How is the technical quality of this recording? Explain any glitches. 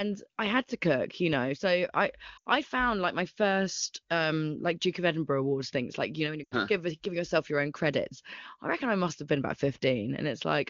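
Two short dropouts stand out, on top of what sounds like clean wideband HD Voice, likely at a high AMR-WB rate.

Lost AMR speech frames hit at 2.37 to 2.48 s, just before "I found like my", and at 6.43 to 6.55 s, between "you know when you" and "give giving yourself your". Each gap is about 80 ms. The decoder keeps stretching the last good sound while fading it out, so you hear a quick fade to near silence before the voice returns a bit rough.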